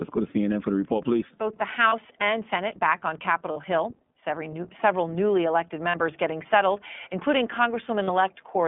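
Throughout, the speech is band-limited to roughly 150 Hz to 3.5 kHz and sounds rough and synthetic. This is iLBC codec damage, consistent with its 15.2 kbps mode. Lost iLBC frames occur at 1.88 s, after "back on" at 3.52 s, between "several newly elected" and "getting settled including" at 5.90 s, and at 8.04 s. Each gap lasts about 40 ms. The decoder repeats the last pitch cycle, producing a brief buzzy held vowel before the speech recovers at once.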